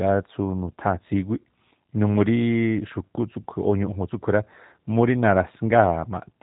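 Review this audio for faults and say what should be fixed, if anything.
The speech passed through a G.729 codec, which rebuilds each 10 ms frame from a vocal-tract filter, a pitch predictor and a handful of pulses, and drops everything above 4 kHz. Throughout, the speech sounds muffled, rough and slightly synthetic, which fits a G.729A coder running at 8 kbit/s. To prevent it, carry the call over a wideband codec such as G.722 or Opus instead of G.729.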